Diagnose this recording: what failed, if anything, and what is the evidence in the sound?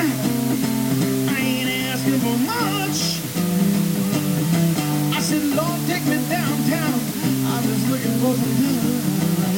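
Low bit depth with dither, introduced at sample-format conversion, runs through the whole recording. A steady, even hiss sits only about 10 dB under the sound, loud enough to be obvious yet free of any crunch or grit. That level fits a 4-bit word length: dither was added before rounding, so the error became constant white noise. Undithered truncation would instead produce harsh distortion that follows the signal and gates off in quiet passages.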